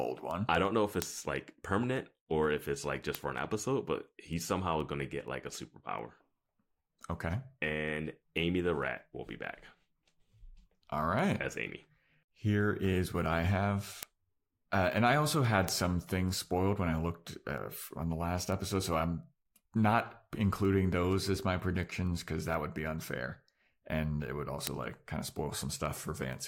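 Word clock ticks recur about five times a second through this speech from 0.31 s to 26.33 s, as an unlocked receiver clock, roughly 100 ppm off, drops or repeats single samples.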